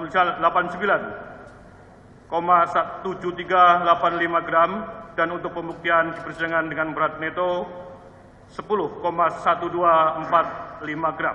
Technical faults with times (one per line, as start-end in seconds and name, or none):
none